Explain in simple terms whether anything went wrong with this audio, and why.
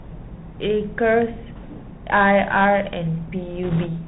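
The whole recording went through a Bluetooth CVSD headset codec, the basic format older headsets use for calls. It keeps only the low part of the sound, nothing above about 4 kHz, so the speech sounds muffled and thin, like a phone call. The codec describes the sound only as tiny steps up or down. Sharp s sounds come out scratchy. A grainy hiss sits under the speech the whole time.

Near the end, from 3.63 to 3.86 s, there are bit errors on a Bluetooth voice link. Some of the data flipped on its way through the air, roughly a few bits in every hundred. Each flipped bit only nudges the sound a little, so there are no sharp clicks. Instead, a rushing, crackly noise spreads over the speech for that short stretch, then clears.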